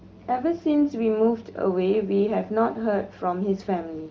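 No technical faults are audible.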